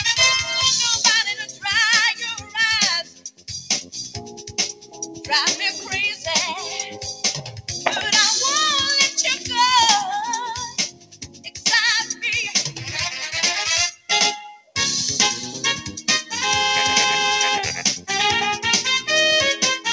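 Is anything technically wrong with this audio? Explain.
Yes. A speech-tuned noise suppressor was left running on this non-speech audio. It treats sustained content as noise, so the level swings by around 10 dB, pumping and thinning.

Sound cut by the noise suppressor occurs at 1.4–1.65 s, 2.14–2.56 s, 3.03–5.29 s, 6.93–7.24 s, 7.4–7.7 s, 10.68–11.66 s, 13.91–14.1 s and 14.56–14.76 s. Held or decaying parts are pulled down by about 8 to 17 dB, with the deepest drop, about 17 dB, at 3.03–5.29 s.

The call path itself, which has nothing above 8 kHz and fits a 64 kbps G.722 stream, is not at fault here.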